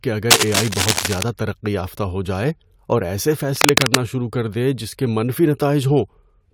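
From 0.30 to 1.23 s, and again from 3.56 to 3.96 s, cable scratch noise cuts across the speech as a dense, crackling rustle, likely from a worn lead or connector being moved so that its contact resistance jumps erratically. The first stretch sits about level with the speech. The second is somewhat louder than it. A spectrogram shows ragged broadband smears with vertical flecks, and the waveform shows spiky, irregular bursts.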